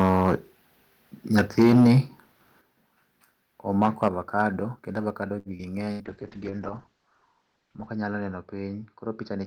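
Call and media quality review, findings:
Microphone overload, 0.00–0.35, 1.38–1.99, 3.81–4.08, 4.40–4.42 s: harsh crackle on loud peaks, about 2 to 9 dB over. Likely input gain too high, converter flat-topping the peaks.

Microphone volume stepped down, 1.62, 2.61, 4.08 s: sudden level drops of about 2, 8 and 5 dB. Likely call software cutting device input gain after clipped peaks.

Short stall from a late packet, 5.39–5.48 s: sound held about 60 ms, nothing lost. Jitter buffer ran dry and stretched audio until the delayed packet arrived.

Short concealed packet loss, 5.57–5.62 s: brief smear, about 40 ms dropped. Decoder extrapolated the preceding sound for 18 ms, then crossfaded into the real audio.

Burst of packet loss, 5.91–6.03 s: fading held sound, then audio jumps ahead about 80 ms. Consecutive packets lost, concealment attenuating until decoding resumed.

Call bitrate drop, 6.07 s to end: muffled, watery sound. 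Encoder forced from 32 to 7 kbps, bandwidth cut from 20 kHz to 8 kHz, lowest for 1.85 s.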